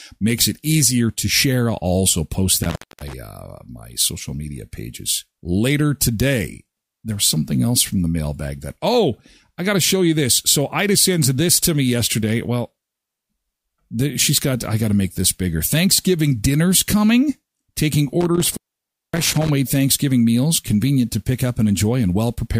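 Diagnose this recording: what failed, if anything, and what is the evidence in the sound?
The speech drops out abruptly twice, between 2.63 and 3.13 s and again between 18.21 and 19.50 s, with crackle at the edges of each gap and faint hiss where the signal should be. The failure sits in the analogue wiring: an intermittent contact, a loose cable or plug that momentarily opens the signal path. The line stays open for about 253 ms in the first event and about 568 ms in the second.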